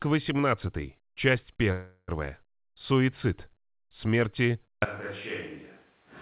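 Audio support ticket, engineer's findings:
Call audio freeze, 1.72 to 2.10 s: sound smears into a fading buzz, then 40 ms of silence, then picks up where it stopped. Nothing lost, just 0.36 s extra delay. Likely packets held up and the jitter buffer ran dry.

Switch to a distant microphone, 4.85 s to end: sudden jump to roomy, hollow speech, thinner bass, roughly 10 dB quieter, room noise only about 30 dB under the speech. Likely the close mic dropped and a far one took over. The call path's 4 kHz top end carries through.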